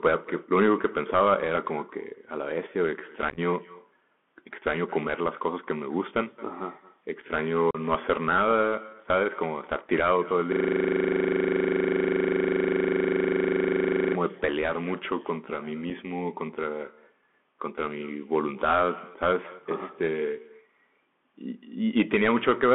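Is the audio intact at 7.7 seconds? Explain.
No. From 7.71 to 7.77 s there is unconcealed Bluetooth headset packet loss. About 37.5 ms of audio is simply gone. That fits a run of roughly ten of the tiny voice packets that travel between headset and phone. Nothing filled the gap with a guess, so silence or an idle pattern took its place. The hole has hard edges that can click. The sound then returns weaker for a moment, as the CVSD decoder recovers its step size.

That same moment also carries the Bluetooth CVSD headset codec. The audio sits in a telephone band of 200 Hz to 3.4 kHz, which fits a 64 kbps CVSD link. Each sample is coded as a single up-or-down step, and the step size adapts. Sharp, loud high content outruns those steps and distorts. Sibilants turn scratchy, and a granular hiss sits underneath. The damage is plainly audible here.

The echo with no canceller is present too. The far end's loudspeaker is picked up by its microphone, and nothing removes it. 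So the talker returns about a fifth of a second later. That copy sits about 23 dB down. It sounds thinner, like a faint shadow trailing each sound.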